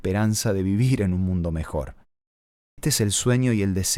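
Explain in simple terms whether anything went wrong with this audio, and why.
The output device dozed off during a silent stretch of about 0.66 seconds and was slow to wake when sound came back. That is a clipped start after a pause. At 2.63 seconds, speech resumes, but the first 0.15 seconds, up to about 2.78 seconds, never reaches your ears. The word there seems to jump in abruptly from nowhere, missing its opening sounds. The silence before it, by contrast, is just a muted pause.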